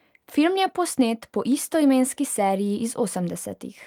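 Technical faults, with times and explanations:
Nothing stood out as a technical fault on listening to this speech recording.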